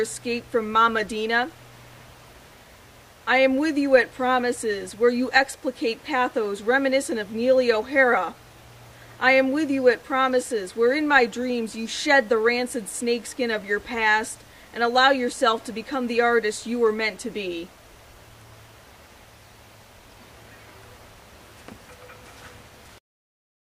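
The signal stays technically sound across the whole recording, with no audible faults at any point.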